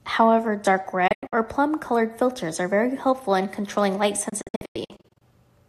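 At 1.07 s the speech breaks up in a digital broadcast dropout: the receiver mutes when frames fail, fading out within 8 ms, leaving 168 ms of holes over 240 ms. It recurs from 4.29 to 5.22 s, losing 432 ms across 912 ms. Clean silent gaps rather than smeared concealment set it apart.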